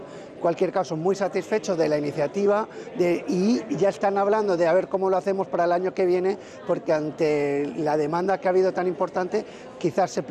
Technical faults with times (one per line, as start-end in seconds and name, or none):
0.00-10.31 MP2 compression